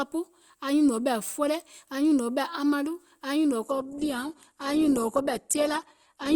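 Adaptive stream at a lower bitrate from 3.63 s: the stream switched down abruptly without a gap, and nothing above 12.3 kHz remains, consistent with 16 kbit/s Opus.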